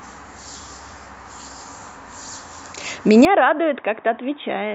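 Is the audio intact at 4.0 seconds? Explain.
No. From 3.25 s to the end, the speech is cut off above 3.8 kHz and drops about 10 dB, with faint new background noise, likely from the input switching to a poorer device. A codec bandwidth drop would not also change level and background noise.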